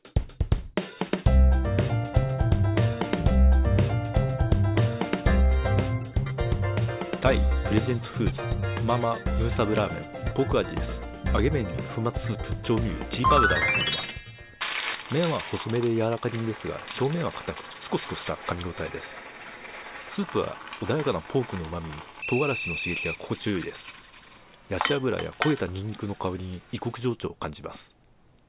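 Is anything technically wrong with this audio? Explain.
No, nothing technically wrong can be heard in this audio. There is no audible fault at any point in the recording.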